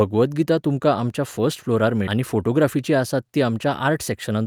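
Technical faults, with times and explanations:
2.07 s, skip ahead: right after "तुमकां आमच्या फस्ट फ्लोरार" the speech jumps forward, roughly 0.7 s dropped and the two sides butted together with no gap.
4.12–4.46 s, jitter buffer speed-up: the tail runs about 8% fast at unchanged pitch, as the buffer trimmed tiny slices, around 40 ms in all, to shed surplus delay.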